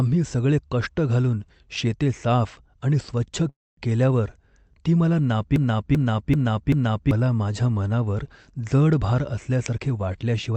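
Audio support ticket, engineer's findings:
Call audio freeze, 3.49–3.80 s. Speech halts for about 0.31 s: the last sound is stretched out as a fading fill, then roughly 0.22 s of silence. Likely cause: delayed packets left the jitter buffer empty. Playback resumes exactly where it stopped, at "केल्यावर ती मला", so nothing is dropped, but the stream now runs about 279 ms later than before.

Broken-record loop, 5.56–7.11 s. Just after "केल्यावर ती मला", a 387 ms fragment repeats four times back to back with no variation, then the speech jumps ahead to "माझ्या मनावर जड भार". Likely cause: a stall in the player, encoder or stream that kept re-sending its last buffered chunk. The speech that belonged in that span is lost.

Jitter buffer speed-up, 9.70 s to end of clip. After "माझ्या मनावर जड भार", the speech plays about 11% fast at unchanged pitch and sounds rushed. The receiver had more buffered audio than its target and cut out a series of pitch-period-length slices, around a tenth of a second in total, to bring latency back down. 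The Opus call path limits the top end to about 8 kHz.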